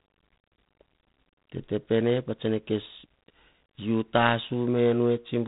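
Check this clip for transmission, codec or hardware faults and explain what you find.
There's one codec fault. G.726 ADPCM runs throughout: coarse adaptive difference coding, which fits the 24 kbit/s mode, leaves a rasping hiss tracking the speech level, with nothing above 3.8 kHz.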